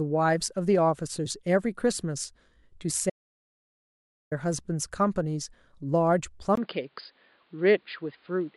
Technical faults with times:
3.10-4.31 audio dropout to silence
6.55-8.56 input switched to a poorer device

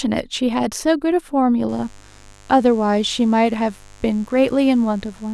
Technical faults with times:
1.69-5.33 mains buzz

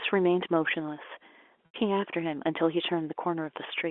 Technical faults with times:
1.66-1.74 packet loss with pitch repetition

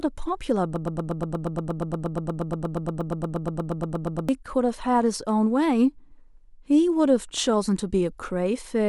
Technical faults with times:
0.76-4.29 broken-record loop

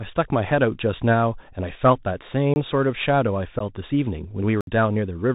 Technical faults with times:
0.00-5.35 Bluetooth CVSD headset codec
1.95 unconcealed Bluetooth headset packet loss
2.54-2.56 block of digital silence
3.59-3.62 unconcealed Bluetooth headset packet loss
4.61-4.67 block of digital silence

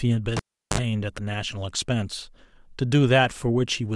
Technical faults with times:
0.37-0.80 cable pulled and plugged in

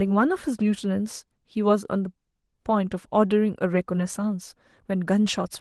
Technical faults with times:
none

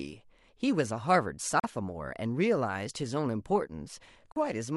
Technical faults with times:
1.60-1.64 Bluetooth dropout
4.32-4.36 Bluetooth dropout

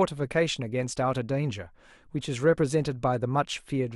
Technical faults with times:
0.61 corrupt frame decoded

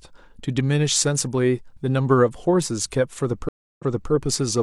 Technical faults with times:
3.49-4.12 stream reconnect

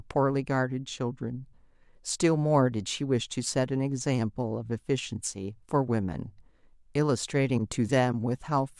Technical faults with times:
none

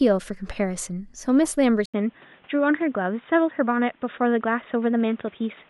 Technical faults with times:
1.86-5.70 input switched to a poorer device

